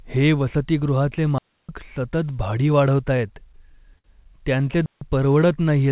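A digital wireless dropout runs from 1.38 to 1.69 s. The link lost too much data, and the receiver muted with a very quick fade, leaving a clean hole of near silence about 0.31 s long with no noise burst on either side.

Repeated stalls (stutter) follow from 3.17 to 4.07 s. Late-arriving packets drained the jitter buffer seven times. Each time, the receiver stretched the last sound to fill the wait, about 119 ms in total, with the longest fill 58 ms. Nothing is lost, but the audio drags and stumbles.

A second digital wireless dropout comes at 4.86 to 5.01 s, a shorter clean mute of about 0.15 s with the same quick fade and no noise around it. Throughout, the call path's band stops at 4 kHz, which fits G.711 A-law at 64 kbps.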